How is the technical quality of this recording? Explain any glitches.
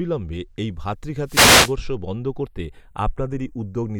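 The speech has two clear faults: a slow flanging colour that runs the whole length, and a burst of static about a second in.

From start to finish, the channels are drifting apart. It sounds like a gentle, slowly moving flange when the channels are heard together or summed to mono. The two sides come from devices running on separate clocks that disagree by only a few tens of parts per million, so the delay between them creeps up to a fraction of a millisecond. Combining the channels then cuts comb-filter notches that slide gradually across the spectrum.

From 1.25 to 1.76 s there is a wireless microphone noise hit, heard as a swish of hiss and static that swells over the voice for about half a second. An analogue FM radio microphone's signal faded as reflected paths cancelled at the receiver. With less signal, the receiver's own noise rose and partly masked the speech before the link recovered.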